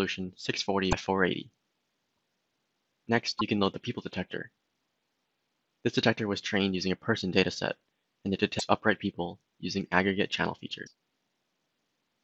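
Short glitches interrupt the sound at 0.90 to 0.93 s, 2.16 s, 3.38 to 3.41 s, 8.58 to 8.61 s and 10.86 to 10.88 s. Each jumps abruptly forward, and all but the one at 2.16 s last roughly one 26 ms frame. This is likely a broken MP3 bit reservoir: after frames went missing, the next frame looked back for its borrowed data, found bytes from the wrong frame, and decoded them into a brief garbled fragment.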